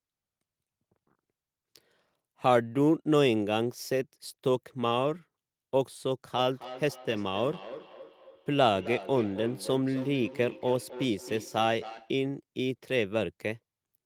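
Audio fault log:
6.37–12.24 s, feedback echo between two devices: a second device in the room replays the call and the first microphone captures it, beyond its echo canceller's reach, so the speech returns roughly every 300 ms, thinner and ringing, peaking about 15 dB below the direct voice.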